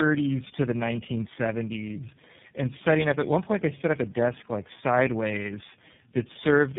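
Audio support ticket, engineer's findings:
Tandem speech coding, whole clip: rough, muffled, warbly speech. This fits about four low-rate speech codecs in series with G.711 hops between them, likely ending in iLBC, each coder recoding the previous one's damage. Spectrogram: hard ceiling near 3.7 kHz, smeared, wobbling harmonics.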